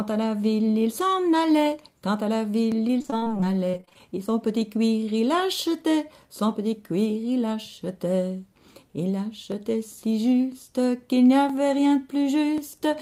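At 2.72 s a single sharp click appears, most likely dropped samples: under a millisecond of the stream went missing, so the waveform steps abruptly to a later value and produces a brief broadband tick rather than any audible gap.

From 2.87 to 4.02 s comes repeated packet loss with robotic sound. Short holes recur throughout the span, the longest 40 ms, and about a quarter of it is patched by stretching the preceding sound. The result is choppy and robotic, with fragments missing.

The same single clicks return at 9.52, 11.50 and 12.58 s, each a thin vertical line in the spectrum, likely from the same kind of sub-millisecond sample loss.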